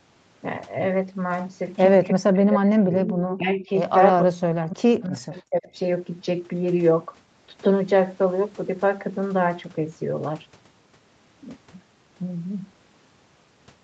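From 2.12 to 3.09 s the speech sinks sharply, as much as about 40 dB at its deepest, for roughly a second. This is speech suppressed in double talk: the likely cause is that both ends were talking at once and the echo canceller, unable to separate this talker from loudspeaker echo, pulled the whole signal down.

At 3.08 to 3.15 s and again at 3.31 to 3.37 s, short scraps of the voice return about 300 ms late, first at about 10 dB below the speech, then at about 15 dB below. This is echo leak, likely from a far end on loudspeaker whose canceller let part of its microphone pickup through and sent it back.

From 3.37 to 3.69 s the level dips more gently, by about 10 dB. Then from 4.19 to 5.76 s, about one and a half seconds, it again falls by as much as about 40 dB. Both are further double-talk suppression, likely from the same clash of talkers.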